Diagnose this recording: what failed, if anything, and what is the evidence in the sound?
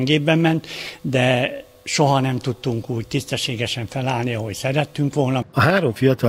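Nothing in this recording points to a failure at any stage of the chain. No event in the sound places a problem in the wiring, the converters, the processing, the transmission or the playback.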